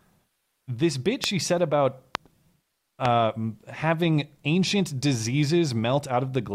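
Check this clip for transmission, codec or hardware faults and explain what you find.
The speech carries three loud pops, at 1.24 s (between "this bit" and "she said about"), 2.15 s (after "bit she said about") and 3.05 s (just before "having ancient"). Each is a single sharp crack of about 20 ms, roughly 20 dB above the speech, which continues underneath. The likely cause is a brief voltage spike from a switch, static or driver glitch.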